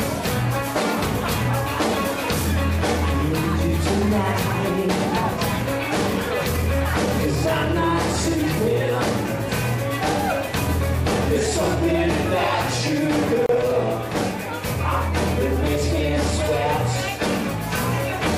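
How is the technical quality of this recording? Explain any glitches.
The recording has one glitch: a gap at a join of encoded pieces. From 13.46 to 13.49 s, the sound drops out for about 32 ms. It then resumes exactly where it stopped. The audio was encoded as separate pieces and butted together untrimmed. The encoder's start-up delay and the padded final frame both remained as silence at the seam. The codec smears the hole's edges, so the fully silent part is shorter than the whole gap. It registers as a brief blink in otherwise continuous sound.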